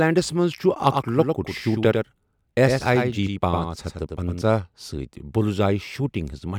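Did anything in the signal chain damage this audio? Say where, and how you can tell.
Yes: doubled audio track from 0.84 to 4.42 s, likely a second, slower capture path. A full-band copy trails about 100 ms, roughly 5 dB down; the spectrogram shows each onset twice.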